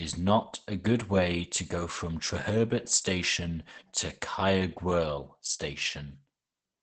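Speech with heavy Opus compression throughout: muffled, hoarse and cut off around 8 kHz, likely from a low-rate SILK speech-mode encode, consistent with about 12 kbps.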